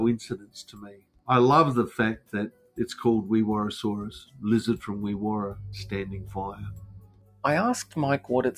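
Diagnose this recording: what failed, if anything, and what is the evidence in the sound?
Call processing: a noise suppressor meant for speech was applied to this sound. It pumps level by about 15 dB, so the waveform swells on attacks and sags through held passages.

Sound cut by the noise suppressor at 0.24–1.28, 2.17–2.34, 2.5–2.78, 4.24–4.43 and 6.52–7.44 s. Sustained energy drops by up to about 19 dB, leaving faded patches on the spectrogram.

Analogue wiring: mains hum at 50 Hz from 5.51 s to the end, about 5 dB below the signal. It shows as a steady horizontal spectrogram line, coupled in by a ground loop or nearby transformer.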